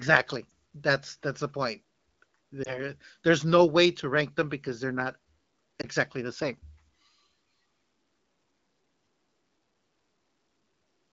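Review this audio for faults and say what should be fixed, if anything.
Lost AMR speech frames at 0.49–0.51 s, 2.64–2.80 s and 5.81–5.85 s: a brief dip or warble where the wideband decoder concealed what sounds like a single bad frame.

Prevention: improve radio link quality or use stronger channel coding so fewer frames fail their checksum.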